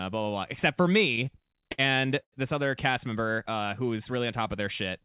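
From 1.16 to 1.80 s the speech hitches in repeated stalls (stutter). The jitter buffer ran empty nine times, with the longest gap 62 ms, and each time the last sound was stretched to cover it, 133 ms in total. On a spectrogram these show as short smeared, flattened patches between normal frames.

A call audio freeze follows at 2.22 to 2.34 s. The sound carries on as a fading buzz, then drops to about 70 ms of silence, inserting 100 ms before the speech resumes intact. The waveform shows a decaying tail into flat line. Packets held up in transit likely starved the buffer.

Throughout, the spectrogram is empty above 4 kHz, which fits a narrowband G.711 A-law call path.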